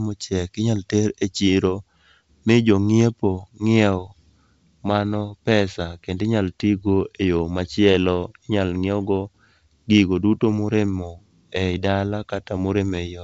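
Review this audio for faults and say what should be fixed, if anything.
Nothing stood out on listening, so there is nothing here that needs fixing.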